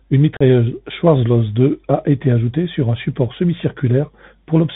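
Throughout, the speech carries the Bluetooth CVSD headset codec. Nothing passes above 4 kHz, and the codec's one-bit up-or-down steps, which fits a 64 kbps stream, cannot keep pace with loud high sounds. The result is scratchy s sounds and a granular hiss under the speech, which sets it apart from a clean telephone band limit.

From 0.37 to 0.41 s there is unconcealed Bluetooth headset packet loss. About 37.5 ms, a handful of short packets, never arrived and was replaced by silence or an idle pattern, leaving a hole with abrupt edges. The speech then resumes briefly quieter as the CVSD step size rebuilds. Nothing is smoothed over or repeated, which separates it from concealed loss.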